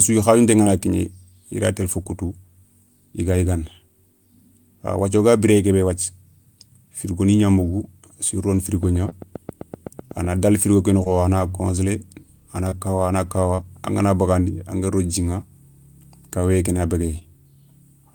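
Short concealed packet loss occurs at 0.63 s, at 2.03 s just after "i ray télé fo", and again at 9.09, 11.03, 12.69, 13.56 (after "kawa a na") and 17.19 s (after "kawéyé ké na"). Each time, about 20 ms of audio failed to arrive. The decoder bridged the gap by extending the preceding sound, then blended back. Each one is heard as a brief smear or wobble.

From 8.83 to 10.26 s, a train of clicks overlaps the 9.09 s dropout. About ten near-identical pops arrive at a steady 7.8 per second, peaking about 5 dB above the speech. The likely cause is electrical interference or a faulty connection or power supply.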